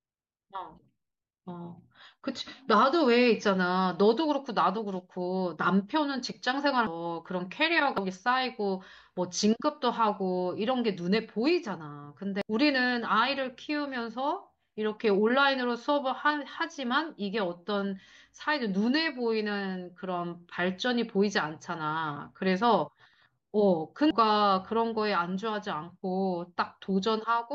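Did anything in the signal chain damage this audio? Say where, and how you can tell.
Yes. Compressed frames were skipped at the codec decode stage, missing or rejected as damaged. Speech jumps ahead at 6.87, 7.98, 12.42 and 24.11 s, losing roughly 0.4, 0.4 and 0.5 s, nearer 0.7 s at 24.11 s.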